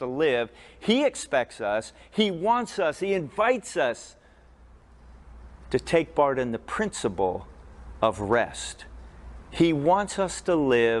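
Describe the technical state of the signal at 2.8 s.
At 2.8 s the signal is intact, with no audible dropout, distortion or other fault at that moment.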